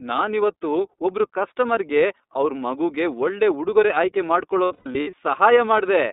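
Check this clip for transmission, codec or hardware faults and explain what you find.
Two faults are present: the whole clip has been through the iLBC codec, and a burst of lost iLBC frames damages the audio between 4.65 and 5.14 s.

The iLBC codec colours all 6 seconds of this speech. The band is held to roughly 250 Hz to 3.7 kHz, so sibilants lose their sparkle and the low end is thin. Because iLBC codes each frame's excitation on its own, the voice has a plainly audible rough, slightly synthetic grain, and the frame timing fits its 30 ms mode. Unlike a plain low-pass filter, this adds texture rather than only dulling the sound, and unlike a wideband codec it removes everything above 4 kHz.

The lost iLBC frames come in a cluster from 4.65 to 5.14 s. About 300 ms of audio is missing in scattered pieces, and the longest single gap is roughly a tenth of a second. At each loss the decoder repeats the last pitch cycle blended with noise, so the gaps sound like brief held, buzzy or breathy vowel fragments rather than silence. 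Because each frame decodes independently, clean speech returns almost at once after every gap. That quick recovery separates this from loss in codecs that carry state from one frame to the next, which leave a smeared tail after the gap, and from simple dropouts, which go silent.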